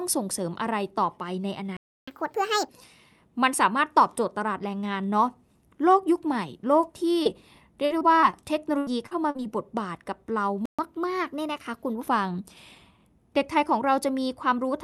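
At 1.77 s the speech stops dead for about 0.31 s, a playback stall, likely from the player running short of data or being blocked. On a waveform it is a flat line, and the spectrogram shows a blank vertical band across all frequencies.

From 2.08 to 2.69 s comes catch-up at higher speed. The player races through its backlog at 1.5 times normal rate, so the speech sounds hurried and raised by roughly seven semitones, then drops back. In the spectrogram the harmonics sit visibly higher and are squeezed closer together in time.

At 7.23 s a short concealed packet loss leaves a 20 ms hole that the receiver patched by extending the preceding sound. It is heard as a tiny smear. The spectrogram shows a brief stretch of smoothed, repeated texture instead of fresh detail.

Repeated packet loss gives a robotic sound from 7.85 to 8.35 s and again from 8.78 to 9.40 s. Each stretch has four gaps, patched with continued sound, and the longest lasts about 52 ms in the first and 80 ms in the second. 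The speech turns choppy, with pieces missing. In the spectrogram the patched stretches look like smeared, copied blocks breaking up the normal harmonic pattern.

A second playback stall, likely with the same cause, silences the audio from 10.66 s for about 0.13 s, again a flat gap in the waveform. A gentler catch-up at higher speed follows from 10.79 to 12.09 s at 1.1 times normal speed. The pitch rises by only about a semitone and a half, and the harmonics sit slightly higher in the spectrogram.

Throughout, the call codec's upper limit shows as a spectrogram ceiling near 12 kHz.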